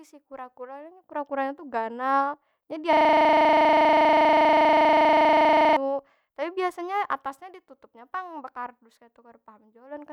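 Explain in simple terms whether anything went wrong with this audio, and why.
From 2.93 to 5.77 s the speech becomes a rough, steady buzz: a system hang loop, where the computer froze and the sound hardware replayed one 40 ms scrap about 25 times a second.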